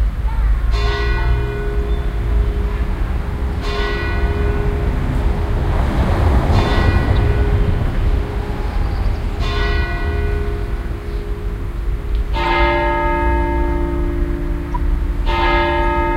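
Corrupt frame decoded: damaged compressed frames were played anyway, misplacing energy across frequencies, giving noisy blips at 12.43–12.45 s and 14.72–14.76 s, each spanning a few frames.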